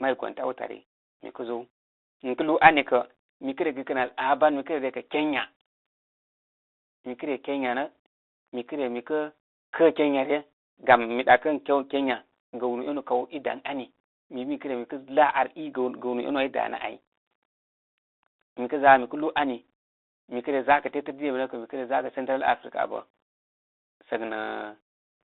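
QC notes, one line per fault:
throughout, Bluetooth CVSD headset codec: the speech sounds thin and boxed in, confined to roughly 300 Hz to 3.7 kHz, with scratchy s sounds and a granular hiss. A one-bit adaptive-step coder, which fits a 64 kbps CVSD link, cannot track fast high-frequency movement.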